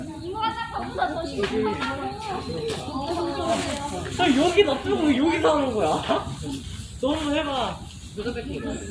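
Nothing stood out on listening to this recording of sounds.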